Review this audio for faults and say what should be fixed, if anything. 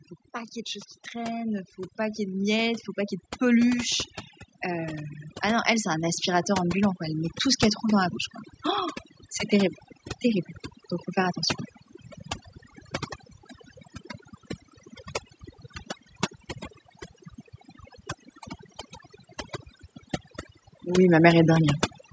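Overdone noise removal affects the entire clip. The noise reduction is set so strong that any frequency band close to its noise estimate is pushed far down or switched off, and the quieter parts of the speech go with it. Between phrases the background collapses to near silence dotted with twinkling specks. To prevent it, use a much lighter reduction depth, or lower the noise at the source so less suppression is needed.

Automatic gain rising happens twice, from 0.65 to 4.09 s and again from 4.62 to 8.19 s, each a gradual lift of about 6 dB. The automatic gain control judged the input too quiet and ramped its gain up over several seconds, so the speech and the residual background swell together instead of holding a steady level. The second ramp starting shortly after the first makes the level creep through the opening eight seconds. To prevent it, set a proper input level so the gain control has no reason to climb, or disable it and fix the level manually.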